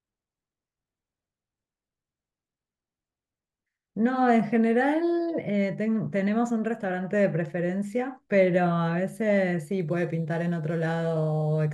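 From 9.8 s to the end, the speech picks up a crude rate conversion. Samples are simply dropped to the nearest position with no filtering, a pattern that points to a 48 kHz to 44.1 kHz change. The dropping repeats on a fixed cycle and creates inharmonic tones about 35 dB below the speech, heard as a faint gritty fizz riding on loud and bright syllables. Unlike codec artefacts, it doesn't swirl or smear; unlike clipping, it stays present at moderate levels.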